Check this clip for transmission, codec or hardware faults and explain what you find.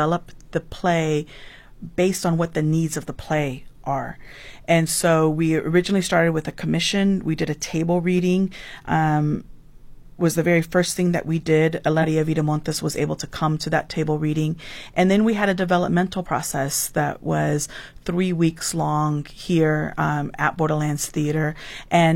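Two spots where compressed frames are skipped. Right after "thing that we did" at 11.99 to 12.05 s, about four frames, around 200 ms of audio, drop out. After "we had a developmental" at 16.21 to 16.26 s, it's a single frame, roughly 50 ms. The frames were missing or rejected as damaged, so playback jumps ahead in whole steps consistent with 46.4 ms frames.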